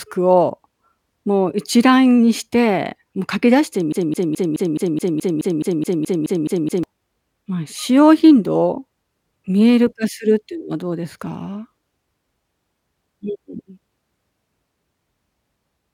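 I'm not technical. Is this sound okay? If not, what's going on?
No. From 3.92 to 6.83 seconds the speech gets stuck: a tiny scrap of sound, about 0.21 seconds long, plays over and over, 14 times in a row, like a scratched record. This is a broken-record loop. The likely cause is that the player or stream briefly stalled and kept replaying the last bit it had instead of moving on. Whatever was said during those three seconds is simply missing.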